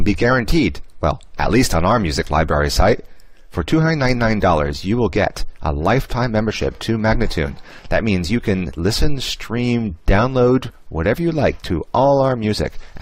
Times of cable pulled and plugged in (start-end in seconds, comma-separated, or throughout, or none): none